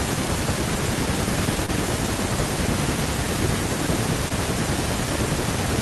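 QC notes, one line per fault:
1.66–1.70 s and 4.28–4.32 s, short concealed packet loss: a brief smear and wobble in the speech at each point. About 20 ms of audio arrived too late to play, which fits one lost packet. The receiver bridged each gap by extending the preceding sound, then crossfaded back into the real signal.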